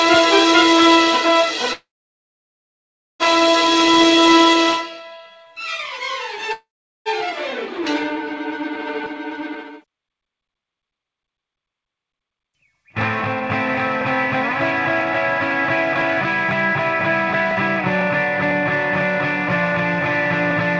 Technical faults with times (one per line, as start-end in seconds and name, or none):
1.73-3.23 call audio freeze
6.53-7.09 call audio freeze
9.40-12.85 jitter buffer speed-up